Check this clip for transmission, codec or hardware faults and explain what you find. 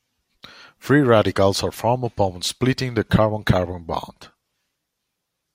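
No transmission, codec or hardware faults are audible anywhere in the speech; the signal holds steady throughout with nothing that points to a fault in the recording or delivery chain.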